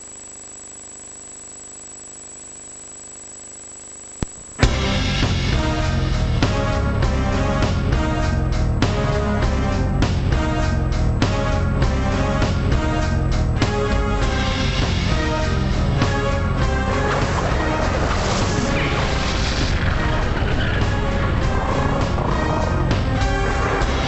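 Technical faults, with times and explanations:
Throughout: wrong sample rate, half speed and an octave low, fitting 48 kHz audio played at 24 kHz; spectrogram features stretched in time, squeezed downward.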